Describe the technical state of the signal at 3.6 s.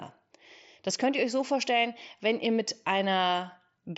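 At 3.6 s the speech is intact, with no dropout, click or distortion, only the bandwidth-limited, lightly grainy character that the mSBC Bluetooth headset link gives throughout.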